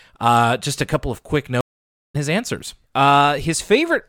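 Stream reconnect at 1.61 s, after "a couple of quick": the connection breaks into 0.52 s of silence, then a fresh decoder resumes roughly half a second later, at "his answers".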